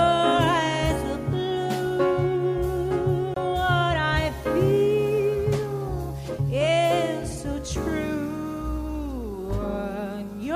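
A tick and very brief dropout at 3.34–3.36 s, after which the sound resumes elsewhere: a CD skip, where the laser jumped to another turn of the disc's spiral.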